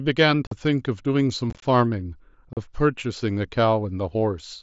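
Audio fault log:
0.47–0.52 s, 1.50–1.63 s, 2.53–2.57 s: unconcealed Bluetooth headset packet loss. Brief hard-edged holes, about 45 ms, 38 ms, and at 1.50 s a chopped 120 ms stretch of short gaps, up to 23 ms each. The headset-to-phone link dropped voice packets, which fits 7.5 ms mSBC frames. Nothing fills in for them. The waveform shows flat cut-outs, and the spectrogram shows vertical blank stripes across the 8 kHz band.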